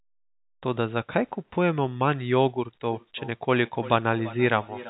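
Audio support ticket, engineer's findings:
Trailing speech repeats at roughly 300 ms spacing from 2.88 s to the end (4.89 s), thinner and ringier each pass, peaking about 17 dB below speech. Feedback echo between two devices: a nearby second device replays this mic's send, and the mic re-captures it. The local echo canceller only subtracts its own playback.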